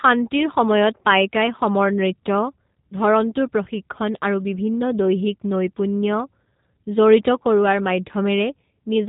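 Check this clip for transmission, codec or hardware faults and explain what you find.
One fault runs through the whole speech clip: G.729 codec coding. The model-rebuilt speech has a slightly rough, synthetic edge and nothing above 3.8 kHz, consistent with an 8 kbit/s G.729 stream. A plain low-pass filter would dull the sound without adding that buzzy texture.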